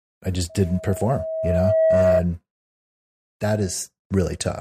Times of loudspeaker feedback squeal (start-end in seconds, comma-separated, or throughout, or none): 0.49-2.25